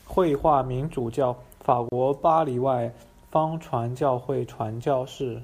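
At 1.89 s the speech drops out abruptly, leaving a gap of about 31 ms, and resumes at 1.92 s exactly where it left off. The edges of the hole are blurred rather than clean. This is a gap at a join of encoded pieces: the audio was encoded in separate sections and spliced without trimming, so the padded final frame of one section and the start-up delay of the next both remain as dead air.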